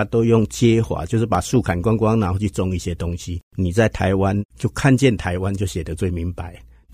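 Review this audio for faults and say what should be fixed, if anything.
A loud pop lands between 1.35 and 1.58 s: two sharp pops in quick succession. They peak a few dB above the speech, which carries on underneath them. A sudden voltage step has been added to the signal, likely from a plug, switch or static discharge. The following circuitry shapes that step into a brief thump. Secure connectors and mute or power down the chain before plugging or switching anything during recording.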